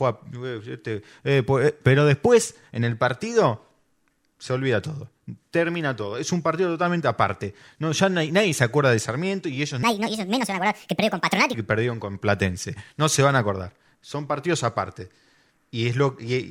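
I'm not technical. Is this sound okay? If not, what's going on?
No. From 9.83 to 11.54 seconds, right after "y ellos", the speech suddenly sounds rushed and squeaky, as if someone pressed fast-forward, then returns to normal just before "y que perdieron con". This is a section at the wrong speed. That stretch plays about 1.54 times too fast, so the voice also rises by roughly seven semitones, about half an octave. The likely cause is an editing program or player running that part on the wrong clock.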